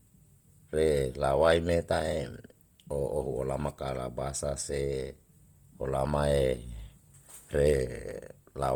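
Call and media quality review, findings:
Throughout, likely Bluetooth LC3 compression at a low bitrate, near 32 kbps: upper spectrum zeroed, noise-filled; speech heavily breathy and grainy up to 20.2 kHz.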